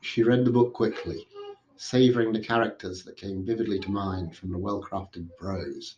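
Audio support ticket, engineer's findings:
No faults found on the speech path.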